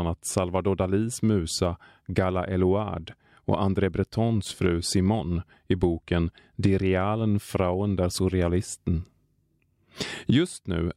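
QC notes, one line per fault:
No technical faults turn up anywhere in the signal's level, continuity or timing.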